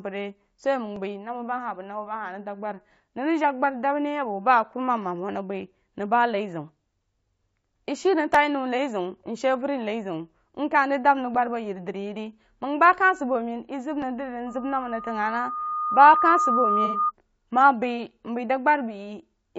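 Across the whole clip the speech has a rough, grainy texture, with noise filling the gaps between voice harmonics and a top band that sounds thin and synthetic. This is plainly audible low-delay AAC compression, likely AAC-ELD at a bitrate that fits about 32 kbps. Its short frames of about 10 ms resolve pitch harmonics poorly, so the roughness sits on every voiced sound. That steady, clip-wide character sets it apart from the brief, local faults below.

At 0.96, 8.34, 9.27, 11.35 and 14.02 s there are single sharp clicks, each a thin vertical line across the spectrum. These are dropped samples, likely less than a millisecond of the stream missing each time, so the waveform jumps straight to a later value. No sound is lost at any of these points. Unlike frame loss, each one is an instant tick with no smeared or noisy stretch.

From 14.46 s a steady tone at 1.2 kHz swells over about a second and a half until it sits about 5 dB above the speech. 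It persists until 17.12 s. This is loudspeaker feedback squeal: a microphone picks up the loudspeaker it feeds, and at this one frequency the loop gain exceeds one, so the tone grows by itself. A fixed pitch that builds gradually distinguishes it from codec noise.

During the squeal, from 16.85 to 16.99 s, the audio turns briefly smeared and phasey for about 90 ms. This is AAC frame loss with concealment, which fits three lost frames. The decoder filled the gap from the last good spectrum instead of going silent. Because the patch is noisy and lasts tens of milliseconds, it does not sound like the single clicks of the dropped samples.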